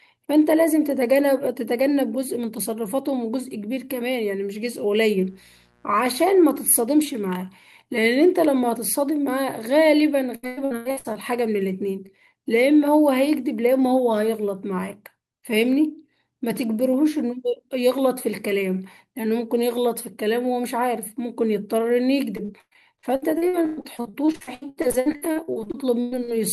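From 5.21 to 6.85 s there is a mains buzz, a faint raspy hum well below the speech. Switching spikes at twice the 60 Hz mains rate leak into the signal. On a spectrogram it shows as a comb of steady horizontal lines at 60 Hz harmonics, reaching several kHz.

Between 10.35 and 11.17 s, repeated packet loss leaves a choppy, robotic patch. More than half of that span is patched by stretching the preceding sound across holes of up to 100 ms. From 22.37 to 26.30 s the same fault returns with dozens of short dropouts, the longest 118 ms, concealing about a third of the stretch. A spectrogram shows blocks of smeared, frozen harmonics split by abrupt vertical seams.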